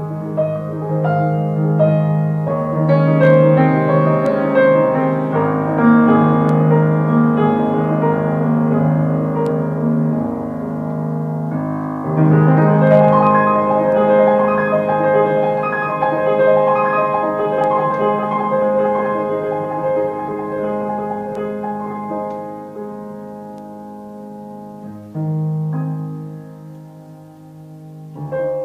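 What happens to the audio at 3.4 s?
Hard clipping runs from 3.24 to 3.61 s. The signal goes about 2 dB past what a stage in the chain can pass, so every peak in that span is sliced flat at the ceiling. Those squared-off tops create harmonics high in the spectrum, heard here as a brief crackle on the loudest moments rather than a constant fuzz. Unlike soft clipping or tape-style saturation, which round the peaks into a warmer thickening, the edges here are abrupt and brittle.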